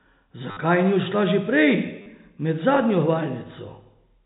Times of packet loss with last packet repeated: 0.51-0.57, 2.02-2.06

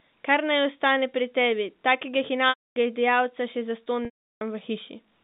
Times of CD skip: none

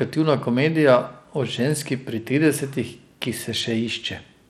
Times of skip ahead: none

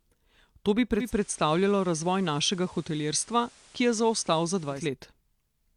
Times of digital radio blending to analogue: 0.94-4.87

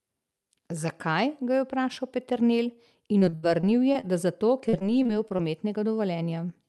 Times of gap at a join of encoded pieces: none

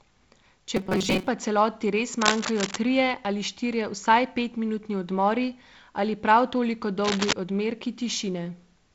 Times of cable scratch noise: 2.21-2.77, 7.02-7.33

